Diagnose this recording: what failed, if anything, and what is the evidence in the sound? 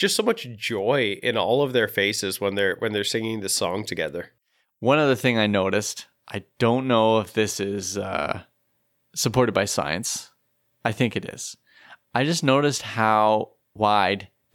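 Nothing stood out on listening to this speech recording that would point to a failure at any stage of the chain.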